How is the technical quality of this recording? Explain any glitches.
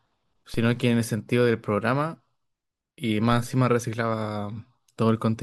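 The recording has one clear technical fault, a single DC step early on. At 0.54 s the waveform's zero line jumps by about -26 dBFS and then drifts back as a 2 Hz high-pass bleeds it away. It is heard as a brief low thump under the speech, and it shows as a sudden baseline shift with a vertical broadband line on the spectrogram.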